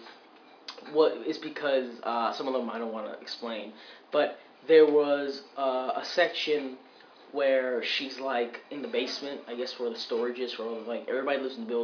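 No technical faults can be heard anywhere in the clip. Nothing in it stands out as a break, glitch or disturbance in the audio path.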